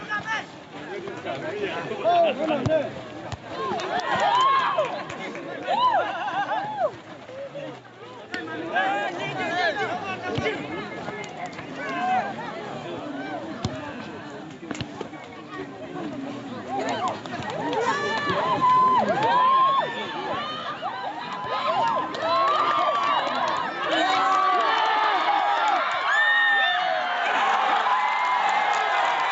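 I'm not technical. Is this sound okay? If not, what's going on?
No. Gain pumping runs through the whole clip, from start to finish. The level gets pulled down sharply each time something loud comes in, by a large amount. Loud and soft moments end up squeezed close together, so it sounds flattened and breathing. The likely cause is a microphone level set far too high, with an automatic level control yanking it back down on each loud sound.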